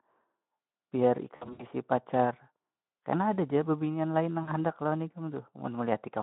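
At 1.35 to 1.67 s, and again at 4.43 to 4.51 s, VoIP packet loss concealed by the speech codec smears the speech into a fading buzzy tone or coloured noise.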